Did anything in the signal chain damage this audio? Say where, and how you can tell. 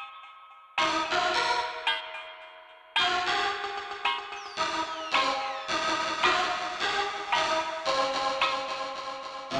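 Yes, at the driver or buffer stage. A steady 86.1 Hz buzz runs through the whole music clip, tracking its level. That's a filter restarted on every block: it forgets its state, so each block starts with a small tick, which fits a 512-sample buffer.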